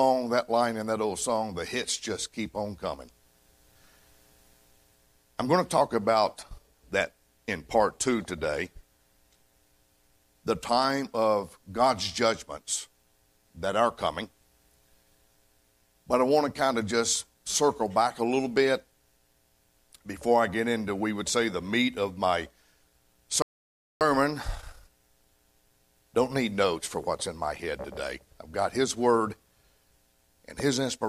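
At 23.42 s the sound cuts to silence for about 0.59 s, resuming at 24.01 s: a playback stall, likely the player starving for data or being blocked.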